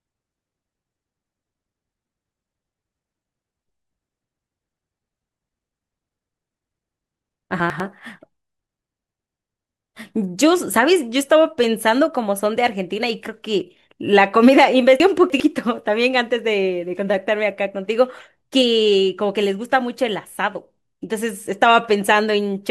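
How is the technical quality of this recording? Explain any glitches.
The recording has two reordering glitches. Chunks out of order occur at 7.6 to 7.8 s (a 100 ms chunk one place late) and 15.0 to 15.4 s (three places late), causing jumbled moments. Unlike a dropout, no audio is missing, only misplaced.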